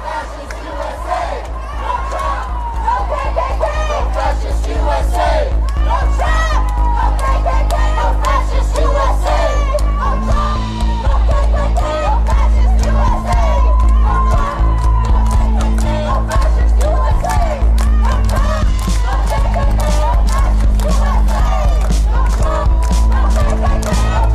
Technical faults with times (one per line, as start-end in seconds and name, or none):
none